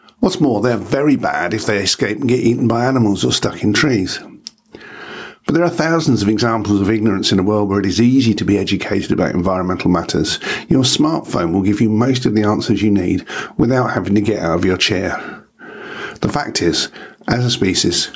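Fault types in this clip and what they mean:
Gain pumping: throughout, the gain swings by roughly 20 dB, pulled down under louder speech so the sound is squashed, likely a fast limiter reining in excessive microphone gain.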